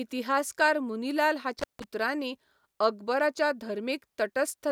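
At 1.59 s the speech drops out in a burst of intermittent contact lasting until about 1.84 s. A loose plug or cable connection breaks for roughly 157 ms, so the signal vanishes behind a sharp crackle at each edge and a faint hiss while the line is open. On a waveform this shows as a near-flat gap framed by jagged spikes; a spectrogram shows bright vertical broadband streaks bracketing a dark, low-level band.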